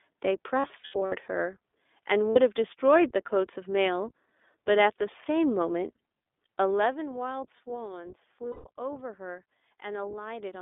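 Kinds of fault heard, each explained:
iLBC codec: The speech passes through a narrowband VoIP codec with the line band limited to 300 Hz to 3.6 kHz. The coding damage is plainly audible. Each 20 ms frame is coded on its own, which fits a bitrate around 15 kbps. The voice sounds rough and somewhat synthetic.
Lost iLBC frames: Packets drop out, and the decoder fills each gap by repeating the last pitch cycle mixed with noise. The gaps sound like a held, buzzy or breathy vowel. The first burst runs from 0.6 to 1.13 s, scattered, with runs up to about 70 ms. Shorter gaps follow at 2.31 s and 8.52 s. The voice recovers almost at once.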